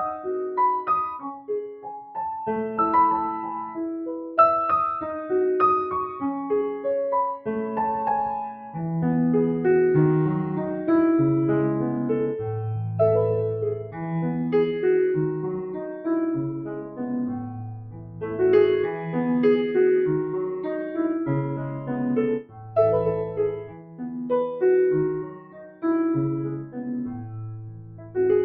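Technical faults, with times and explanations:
Throughout: noise suppressor applied to music or sounds. A speech-tuned suppressor is still switched on, and it keeps mistaking the steady, sustained parts of this sound for background noise. It pulls them down while sharper onsets slip through, so the level keeps breathing up and down by something like 10 dB. That gives the whole clip a pumping, thinned-out feel, with tails and held parts never quite sitting still.
1.25–2.16 s, 13.79–14.02 s, 15.61–19.16 s, 20.51–22.76 s, 23.3–24.31 s, 25.2–25.85 s, 26.51–28.17 s: sound cut by the noise suppressor. In these stretches the suppressor clamps down harder, with dips of about 15, 9, 12, 16, 15, 16 and 15 dB respectively. The longer ones, from 15.61 s onward, each lose roughly 0.7 to 2 seconds of sustained material, so those parts sag or get chopped short while the transients poke out.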